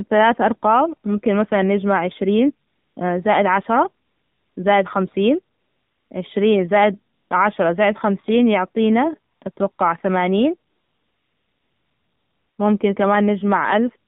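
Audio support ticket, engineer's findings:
Throughout: AMR narrowband mobile codec. Speech band-limited to roughly 150 Hz–3.7 kHz, nothing above 4 kHz. Buzzy, synthetic pulse-excited voicing with plainly audible codec damage, which fits a low AMR-NB mode around 7.4 kbps. Unlike a plain low-pass or resampling fault, the voice itself sounds modelled rather than just dull: the vocal-tract model and sparse pulses coarsen the timbre. Component: mobile leg of the call.

Pauses: AMR comfort noise. Real background drops out and steady, smooth synthetic hiss switches in at 2.68–2.96, 4.06–4.56, 5.56–6.10, 7.14–7.30, 9.32–9.42, 9.52–9.56, 9.72–9.78 and 10.70–12.58 s (longest, 1.88 s). Component: DTX on the sending phone. Differs from a dropout or mute: the gap is filled with noise, not silence, and the noise character changes abruptly at each switch.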